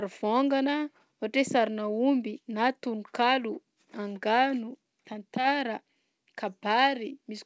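No technical faults can be heard in the speech, which arrives over a call path whose G.722 codec carries nothing above 8 kHz, as that codec normally does.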